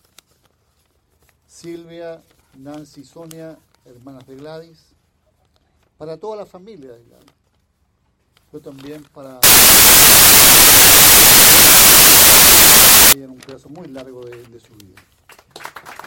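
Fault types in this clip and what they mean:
Samples built from the wrong bytes: the reader assembles each sample from misaligned or swapped bytes, so the fast-changing low-order bits land in the high-order position. From 9.43 to 13.13 s this produces loud, harsh broadband noise.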